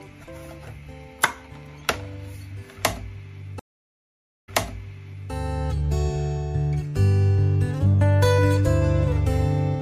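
Around 3.59 s the audio drops out for about 0.85 s, and then it comes back with a soft fade-in. The event runs until 5.31 s, and that pattern is a classic stream reconnect. The connection broke, the player sat silent, then rejoined and spun up a fresh decoder mid-stream. When it resumes, the sound is about 0.86 s earlier than where it cut, so you hear a short stretch repeated because the server resent a burst of already-played audio.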